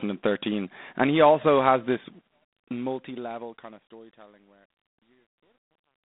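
G.726 ADPCM coding runs through the whole speech clip. The sound is confined to a telephone band of 200 Hz to 3.7 kHz, and nothing passes above 3.8 kHz. Each sample is coded as a coarse difference from a running prediction. Too few bits leave a harsh, rasping hiss that rises and falls with the speech level. The damage is plainly audible and points to the 24 kbit/s rate. The hiss persists until the clip ends at 6.05 s.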